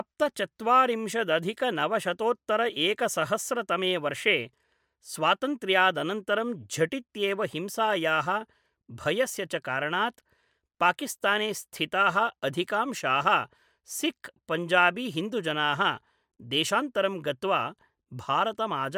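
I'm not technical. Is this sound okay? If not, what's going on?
Yes, no faults are heard.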